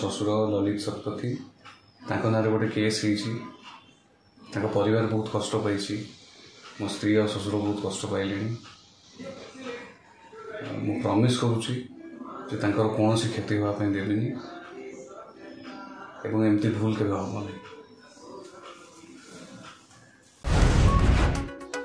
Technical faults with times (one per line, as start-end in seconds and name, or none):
none